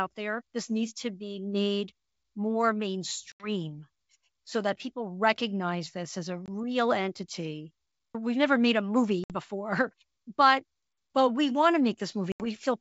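Packet loss on an ADPCM call opens four hard-edged silent holes. The first spans 3.32 to 3.50 s, with 80 ms lost. The second, at 6.46 s after "this as a", lasts 20 ms. The third runs 9.24 to 9.39 s after "never made a", dropping 60 ms. The last, 12.32 to 12.47 s after "but but we want", loses 80 ms. Afterwards the decoder's predictor and step size no longer match the sender's. Speech returns at the wrong level or with a click and distortion, then settles within tens of milliseconds.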